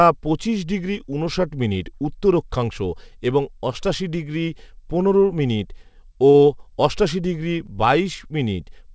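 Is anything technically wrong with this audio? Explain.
Yes. At 6.30 to 6.36 s, just before "অষ্টাশি ডিগ্রি", there is a short stall from a late packet. The jitter buffer ran empty, so the receiver stretched the preceding sound by 42 ms and lost nothing. It sounds like a held, faintly buzzy syllable. A spectrogram shows frozen harmonics, and the waveform shows repeating cycles.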